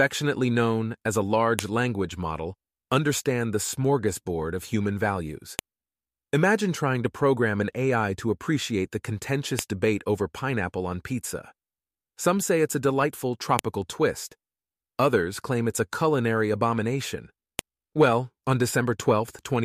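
Sharp, loud clicks snap through the speech at 1.59, 5.59, 9.59, 13.59 and 17.59 s, every 4 s: a file header played as audio at each joined piece.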